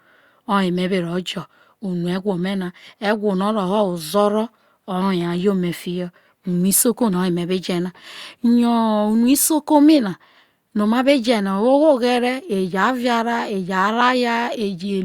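No technical faults can be heard anywhere in the recording.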